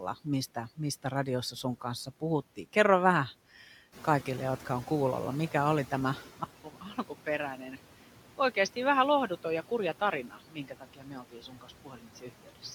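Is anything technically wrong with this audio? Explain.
Yes, there are four kinds of fault here.

Noise suppressor artifacts run through the whole clip. The suppressor pulls down every band it judges to be steady noise, by about 12 dB, frame by frame. The residue drops away between phrases and swells under the speech.

The noise suppressor is catching up from 3.92 to 6.28 s. The room noise itself jumps by about 11 dB near 4.0 s, and the suppressor's noise estimate takes about 2.4 s to follow. So the louder noise first comes through with little reduction, then sinks by about 10 dB as the estimate adapts.

At 6.44 s the input switches to a poorer device, likely a different microphone or a headset call profile taking over. A 200 ms silence marks the switch. Afterwards the band is narrower, so the sound turns dull and boxy. It also drops a few dB in level and carries its own faint background noise.

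Speech is cut by the noise suppressor in three places: 6.64 to 7.27 s with a drop of about 12 dB, 7.56 to 7.78 s with about 9 dB, and 10.28 to 12.64 s with about 12 dB. The suppressor mistook parts of the speech for noise and turned them down, so endings and quiet stretches sound swallowed or faint.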